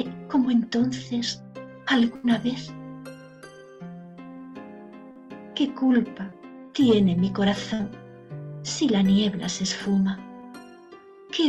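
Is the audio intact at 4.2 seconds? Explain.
Yes, the audio is intact at 4.2 seconds, with nothing there beyond the ordinary coding character of the call path it passed through.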